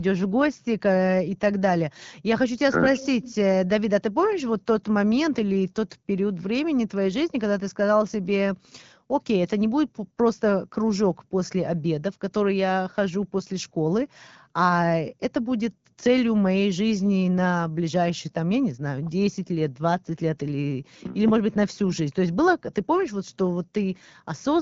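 No technical faults occur at any point in this speech recording.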